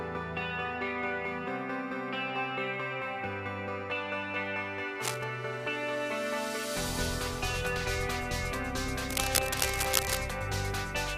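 Cable scratch noise appears from 5.00 to 5.25 s and again from 9.10 to 10.17 s. Both times, dense, irregular crackling and rustling rides over the sound. The first burst is somewhat below the signal level, and the longer second burst is about as loud as the signal itself. The likely cause is a worn cable, connector or control being moved, making its contact resistance jump around rapidly.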